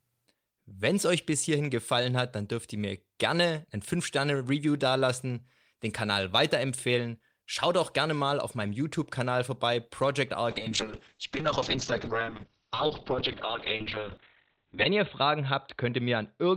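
At 10.51 s the call's bandwidth estimate collapses and the encoder is pushed from 32 kbps down to 7 kbps, a call bitrate drop that lasts to the end of the clip. At that rate the codec quantises far more coarsely and narrows its coded bandwidth from 20 kHz to 4 kHz, so the speech turns muffled and dull, with a rough, watery texture that sits at its worst for about 4.35 s.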